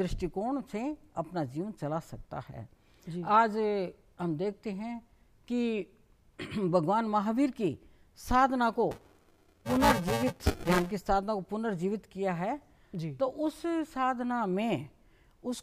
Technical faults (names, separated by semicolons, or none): buffer tearing